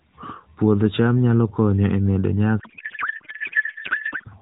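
From 2.60 s to 4.31 s, right after "nyalo konyo e medo", a codec payload misread replaces the speech with garbled, warbling noise. Octet-aligned AMR frames appear to be unpacked as bandwidth-efficient, which scrambles the field positions. The narrowband AMR coding before the fault sounds only lightly coloured, consistent with the 12.2 kbps mode.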